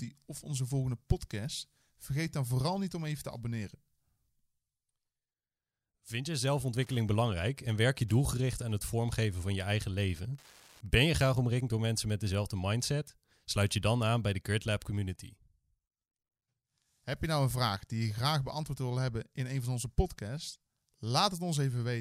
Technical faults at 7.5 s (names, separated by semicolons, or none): Wi-Fi interference